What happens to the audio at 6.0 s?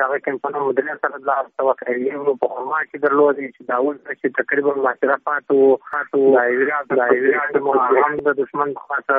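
Around 6.0 s you're inside a doubled audio track, running from 5.93 to 8.19 s. A second, equally loud copy of the sound trails roughly 0.7 s behind, likely from a slower capture path, so everything echoes cleanly, with no room tail, then cuts off abruptly.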